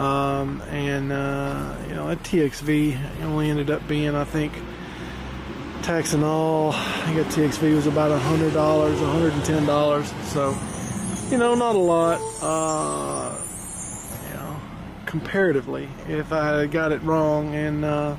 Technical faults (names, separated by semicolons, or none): adaptive stream at a lower bitrate